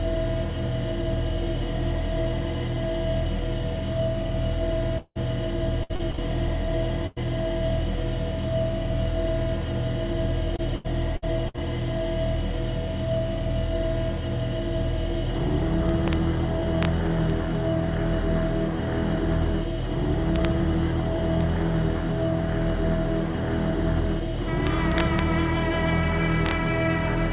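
At 4.98 to 5.17 s the sound breaks off for about 180 ms. It is carried on as a fading buzz or hiss for roughly 170 ms and then drops into about 20 ms of silence before resuming further on. This is a long network dropout, likely a stall in arriving packets. The silent tail after the concealment sets it apart from a shorter burst.

From 5.83 to 6.20 s, and again from 10.56 to 11.63 s, there is repeated packet loss (robotic sound). The first span has five gaps covering about 40% of it, the longest 60 ms. The second has six gaps covering about 23%, the longest 79 ms. Each hole is patched by stretching the last sound, so the audio turns choppy with pieces missing. Unlike a single burst, the patches keep recurring.

At 7.07 to 7.18 s a single burst of packet loss removes about 100 ms. The receiver continues the last sound and fades it, then playback jumps ahead with that stretch gone. It is one isolated gap with no silence afterwards.

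Integer overflow appears at 15.89–16.13, 16.83–16.85, 17.30, 20.36–20.45, 21.41, 24.67–25.19 and 26.46–26.51 s. Loud peaks exceed the integer limit, by up to about 1 dB in the last two, and wrap to the opposite sign instead of being capped. They produce harsh cracks far sharper than clipping's flattened distortion.

Throughout, the call path's G.711 mu-law coding leaves nothing above 4 kHz, which fits a 64 kbps telephone-band link.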